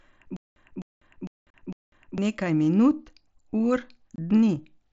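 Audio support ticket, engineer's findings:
Stutter with silent gaps, 0.37–2.18 s. Same 257 ms fragment replays four times, with about 197 ms of digital silence between, 454 ms period. Likely a stalled player or stream replaying its last buffer on each retry, then running dry. Original audio for that span lost.

Unconcealed Bluetooth headset packet loss, 1.50 s. 37.5 ms hole, hard edges, no fill. Fits roughly five lost 7.5 ms mSBC frames on the headset link.

Unconcealed Bluetooth headset packet loss, 4.16 s, just after "minut ur". 22.5 ms dropout, abrupt onset and return. Consistent with about three lost frames. Same mSBC wideband path, no concealment applied.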